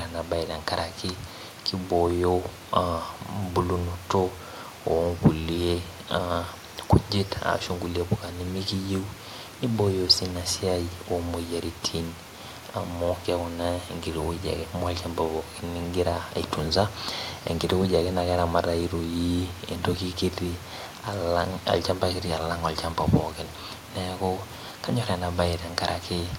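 No audible technical faults present.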